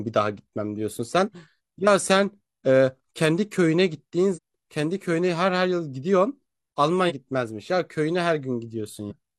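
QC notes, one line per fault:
4.33–4.39 s, 7.06–7.12 s and 9.07–9.13 s: damaged data in a compressed stream. Each event is a short chirp or blip of about 60 ms that cuts across the speech. Bytes in the compressed stream are wrong at these points. The decoder misreads the affected frames and loses sync. It outputs garbled sound until it finds the next valid frame header.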